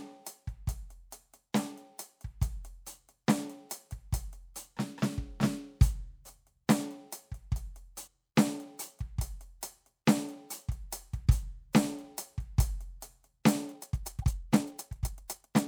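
Damaged data in a compressed stream at 8.04 to 8.08 s and 11.22 to 11.27 s makes the decoder lose frame sync, giving brief glitches in the music. From 13.70 s to the end, playback jumps abruptly to about 1.66 times the pace while the pitch holds, sounding rushed, likely a time-stretched section squeezed by dropping short pieces. Within it, another corrupted stretch at 14.20 to 14.24 s produces the same kind of glitch.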